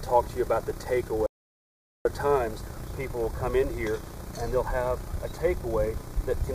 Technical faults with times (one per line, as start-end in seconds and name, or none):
1.26-2.05 audio dropout to silence